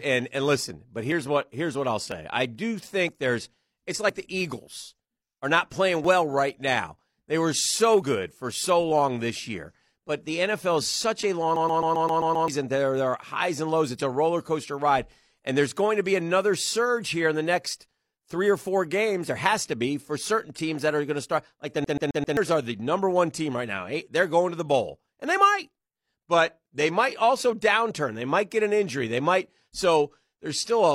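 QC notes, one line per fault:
1.12, 2.12, 3.09, 4.09, 6.05 and 8.02 s: overlap between stream segments. At each point a sliver of speech, about 20 to 40 ms, is missing and the waveform jumps, giving a small click or skip. The 4.09 s skip follows "there's it's", and the 8.02 s skip falls between "were so" and "for so long this". The timing tracks a 1.0 s segment grid, so overlapping segment boundaries were trimmed of audio that was never duplicated. Each event is a single loss with no repetition, which distinguishes it from a skipping disc.
11.56 to 12.48 s and 21.84 to 22.37 s: CD stuck on one turn. The same slice of about 0.13 s plays over and over, with a brief mute at each jump: 7 passes in the first run and 4 in the second, which ends just before "are the number one". A scratch keeps sending the laser back one track on every rotation, causing the rapid, even stutter. Unlike the single clicks of the segment overlaps, the sound repeats rather than drops out.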